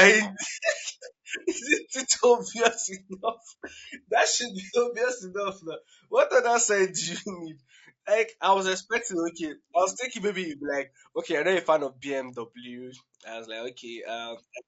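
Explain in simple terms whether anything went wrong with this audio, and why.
The speech sounds rough and grainy throughout, with a thin, artificial top end. That is plainly audible low-delay AAC compression, likely from a video-call codec.

At 2.81 to 2.85 s there is a short smeared, noisy blip. That is AAC frame loss with concealment: about 30 ms went missing, and the decoder patched the gap with a guess.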